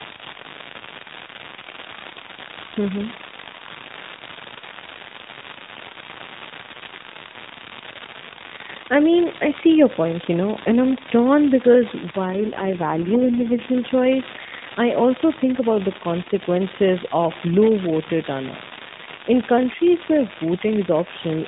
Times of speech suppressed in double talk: none

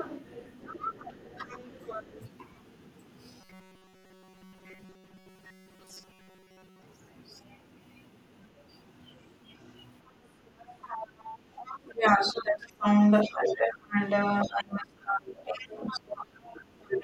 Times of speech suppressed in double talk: 1.80-1.91, 11.85-17.03

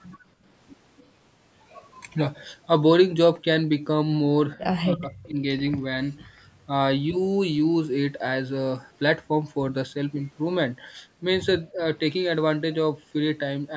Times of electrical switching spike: none

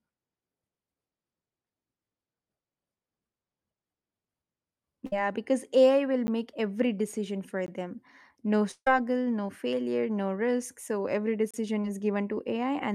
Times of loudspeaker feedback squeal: none

